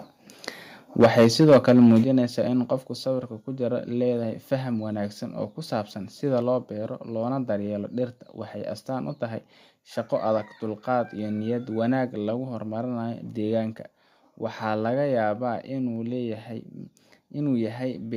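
From 1.0 to 1.99 s the loudest syllables of the speech take on a harsh, crackling edge. This is microphone overload: the input likely ran about 10 dB hotter than the converter could take, so the tops of the peaks are sheared flat across a sizeable share of the waveform. What marks it as clipping rather than a noisy line or a bad connection is that the crackle rides only on the loud moments and adds gritty harmonics instead of hiss or dropouts.

Three abrupt level drops follow, at 1.04 s, 2.04 s and 3.06 s, of about 2 dB, about 6 dB and about 3 dB. Each is the microphone volume being stepped down, likely by call software reacting to the overload. Voice and background fall together in a single instant. That sets it apart from a compressor or automatic gain control, which would ease the level down gradually and tend to recover it. These drops stay down, and they add no distortion of their own.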